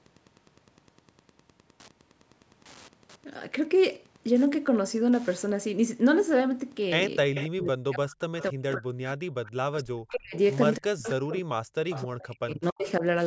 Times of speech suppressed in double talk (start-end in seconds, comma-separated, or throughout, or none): 7.50-9.19, 9.69-10.35, 10.79-13.03